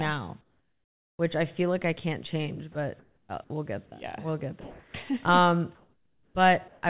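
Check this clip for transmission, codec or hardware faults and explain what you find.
Several faults from a voice detector with discontinuous transmission stand out in this speech, carried over a narrowband call path whose spectrum stops at 4 kHz, which fits G.711 A-law at 64 kbps.

Comfort noise in place of the background fills the pauses from 0.41 to 1.19 s, from 5.75 to 6.35 s, and from 6.68 to 6.83 s. The sender likely stopped transmitting when it detected no speech, and the receiver synthesised a rough copy of the room noise. The real background becomes a flat, featureless hiss. It is about 12 dB quieter in the first gap, about 8 dB quieter in the second, and about 2 dB louder in the last. A spectrogram shows the textured background giving way to a smooth, uniform band with a level step at each edge.

The onset is clipped by the voice detector at 1.17 s, where the first gap ends. The detector was likely about 20 ms late to notice speech returning, so that opening sliver went unsent and comfort noise played in its place. 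The word starts abruptly, without its soft attack. On the waveform the envelope jumps straight from the noise floor to the speech level instead of ramping up.

The sound is chopped by the voice detector between 2.72 and 3.5 s. The detector likely toggled between sending and muting more than once, and about 390 ms of that stretch was replaced by comfort noise. Parts of the speech drop out, leaving more than one hole, so the passage sounds choppy. A spectrogram shows speech energy interrupted by short smooth patches, and the waveform shows small dips where the fill cuts in.

The sound is dropped by the voice detector at 3.86 to 3.92 s and again at 4.61 to 4.94 s. The detector likely mistook part of the speech for background and stopped sending. About 40 ms of speech is lost in the first gap and about 130 ms in the second, with steady noise filling in until speech returns. On a spectrogram, formants end abruptly in a smooth noise patch, and the waveform falls to a low, even floor.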